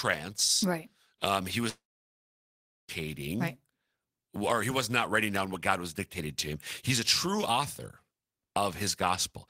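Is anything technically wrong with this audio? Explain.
Yes. A long network dropout runs from 1.69 s to 2.91 s, right after "right um he". The likely cause is that the stream stopped arriving for about 1.2 s, and the receiver tried to bridge the gap by extending the last sound it had. That extension is heard as a brief buzzy, fading continuation, then about 1.09 s of silence. When the speech resumes, it picks up further along, with the missing stretch simply gone.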